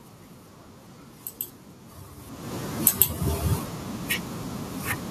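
Speech, with the level pumping shortly after the talker shifts position around two seconds in. Automatic gain falling pulls everything down by about 8 dB from 2.72 to 3.07 s. On a waveform the envelope sinks, and on a spectrogram the room noise floor fades along with the voice. Overlapping it, automatic gain rising lifts voice and background together by about 6 dB from 2.98 to 3.44 s. The waveform swells back and the noise band brightens in step, as the gain control finds the input too quiet and wins back part of the lost level.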